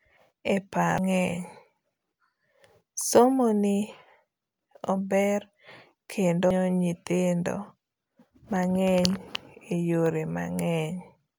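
At 0.98 s and again at 6.51 s, a CD skip occurs: the laser loses its track and lands on a different turn of the spiral. Each time, playback mutes for a few milliseconds, leaving a tick, and the speech resumes abruptly from another point.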